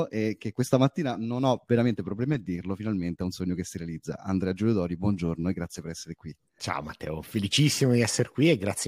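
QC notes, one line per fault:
No faults found on the speech track; nothing to log.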